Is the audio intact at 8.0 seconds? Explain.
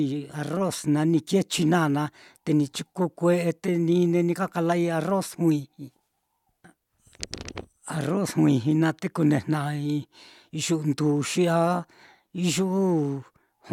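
Yes, at 8.0 seconds the speech runs through intact, with no dropout, click, distortion or other fault at that point.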